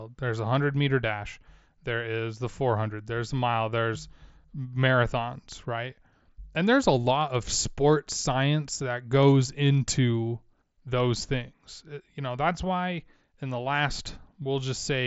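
Nothing is technically wrong with this speech clip, which comes through a Bluetooth mSBC headset link with nothing above about 7.7 kHz.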